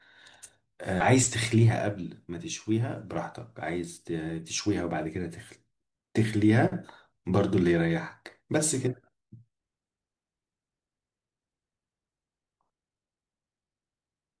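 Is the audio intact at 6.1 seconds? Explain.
Yes, the audio is intact at 6.1 seconds, with no dropout, click, distortion or other fault there.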